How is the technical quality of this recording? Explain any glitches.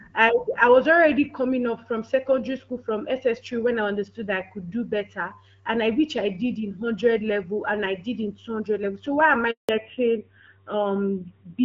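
The recording has two linked glitches near the end, both from the call changing networks. Before them, the sound has the clear, light coding character of HD Voice, consistent with AMR-WB at around 12.65 kbit/s.

Handover gap, 9.51 to 9.69 s, just after "why am I": the phone switched the call to another network, and no speech frames arrived while the new link came up. The sound fades within a few tens of milliseconds and stays silent for about 180 ms, and whatever was said there is lost.

Fallback to narrowband, 9.69 s to the end: once the new link is running, the call no longer uses HD Voice but an older narrowband codec, likely AMR-NB around 7.4 kbit/s. Everything above 4 kHz disappears, so the speech sounds duller, boxier and rougher for the rest of the clip.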